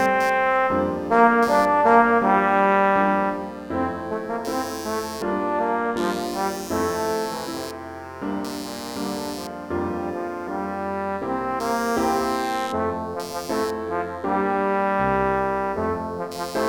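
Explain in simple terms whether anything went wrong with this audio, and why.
Yes, something went wrong. A buzzing noise runs through the whole clip, from start to finish. It pulses around 150 times a second. It sits well below the main sound. This is computer activity noise. When the processor, graphics card or mouse changes how hard it works, the computer's shared electrical ground shifts. That shift leaks into the audio circuit. So the buzz follows the computer's workload, not the recorded sound.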